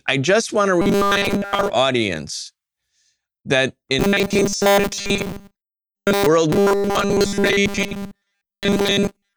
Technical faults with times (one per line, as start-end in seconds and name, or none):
0.82-1.70 robotic sound from repeated short buffers
3.99-6.27 robotic sound from repeated short buffers
6.52-9.36 robotic sound from repeated short buffers